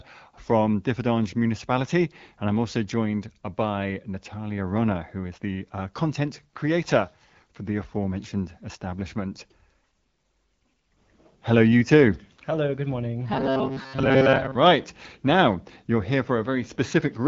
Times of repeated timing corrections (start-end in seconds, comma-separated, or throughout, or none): none